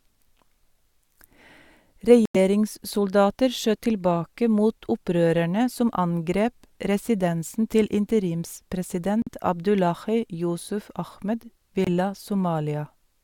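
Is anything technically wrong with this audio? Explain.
Yes. The speech cuts out three times, at 2.25 to 2.37 s, 9.22 to 9.29 s and 11.84 to 11.88 s, roughly 93, 46 and 23 ms of silence. It then picks up further along, which sounds like a likely Bluetooth dropout, with packets missing their deadline and getting discarded.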